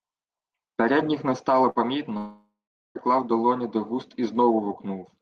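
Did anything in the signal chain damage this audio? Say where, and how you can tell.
Yes. Both faults sit at the network stage, after the Opus call path, whose content tops out near 12 kHz on a spectrogram.

The first is a burst of packet loss at 1.69 to 1.78 s. About 60 ms of sound never arrived, so the receiver stretched the last fragment across the gap and let it decay. It is heard as a brief, fading hold of the last sound before speech resumes slightly further on. On a spectrogram, the last sound freezes into flat horizontal bands that fade. The waveform shows a shrinking continuation instead of the normal varying shape.

The second runs from 2.17 to 2.98 s, about 0.8 s of missing audio, and is likely a long network dropout. Concealment holds the last sound and fades it for a few tenths of a second, then gives way to roughly 0.42 s of near silence before speech returns mid-flow. A spectrogram shows smeared, decaying bands ending in a blank column. 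The waveform tapers to a flat line, then restarts abruptly.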